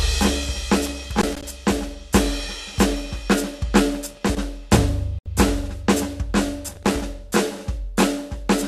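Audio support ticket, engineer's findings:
Loose connector crackle: worn or dirty contact making and breaking intermittently, most likely at a jack or cable connector. Music chopped with irregular scratchy crackle bursts, 0.86–1.43 s, 4.10–4.45 s and 6.71–7.02 s. Each burst roughly 0.3–0.6 s long.

Digital broadcast dropout: receiver lost sync or rejected corrupt frames, muting until valid data resumed. Music cuts to silence 5.19–5.26 s, a gap of about 72 ms, which fits a few lost frames. Audio in the gap is unrecoverable.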